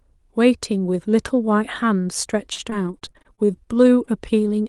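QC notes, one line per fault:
2.53–3.82 s, repeated packet loss (robotic sound): eleven holes, the longest about 51 ms, were each patched by stretching the preceding sound, so about a fifth of this stretch is concealment. The sound turns choppy. A spectrogram shows smeared, copied harmonic blocks separated by abrupt breaks.
4.05–4.09 s, short concealed packet loss: about 20 ms of audio arrived too late or not at all. The receiver bridged the hole by extending the prior sound and then blending back, which gives a brief smear. A spectrogram shows a thin strip of frozen, blurred spectrum.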